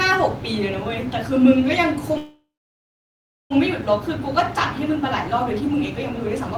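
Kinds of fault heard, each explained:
Call audio freeze: At 2.17 s the speech stops and the last sound is carried on briefly as a fading buzz, then about 1.05 s of silence follows until 3.52 s. Nothing is lost; the speech resumes exactly where it broke off, so the rest of the clip runs about 1.33 s later than it would have. This is likely packets stalled in transit, leaving the jitter buffer empty while the receiver bridged the wait.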